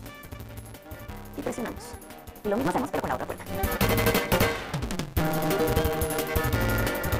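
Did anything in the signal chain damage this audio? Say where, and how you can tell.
Yes. There is a block size mismatch (truncated) at the driver or buffer stage, heard through the whole clip. A steady buzz at 172 Hz runs under the sound. The audio plays about 1.88 times too fast at near-normal pitch. The tail of each block is dropped, which fits a 256-sample read.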